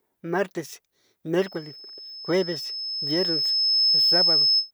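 From 1.38 s to 4.71 s, a 5.2 kHz tone swells over about three seconds into a squeal roughly 10 dB above the speech: loudspeaker feedback squeal, where the microphone re-amplifies its own loudspeaker.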